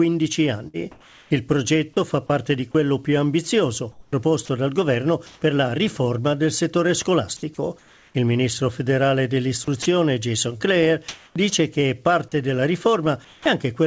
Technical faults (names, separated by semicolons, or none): burst of packet loss; comfort noise in place of the background; sound dropped by the voice detector; sound chopped by the voice detector